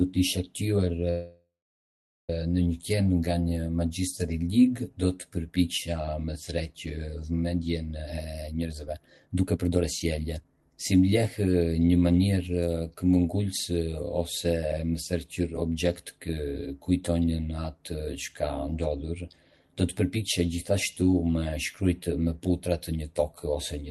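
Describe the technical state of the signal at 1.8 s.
At 1.8 s the signal sits inside a call audio freeze running from 1.10 to 2.30 s. The likely cause is delayed packets draining the jitter buffer. The last sound was stretched into a fading buzz or hiss, then silence for about 0.81 s, so 1.8 s is silent. Audio resumes where it stopped, with nothing lost.

Channel delay (comb filtering) is also present here. One channel lags by roughly 10 ms before the mono sum. Cancellation cuts evenly spaced notches, the first near 40 Hz. The sound is rough or slightly doubled.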